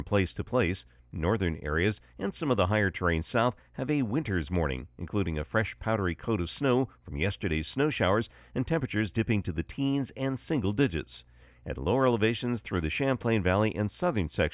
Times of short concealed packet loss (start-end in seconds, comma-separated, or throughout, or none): none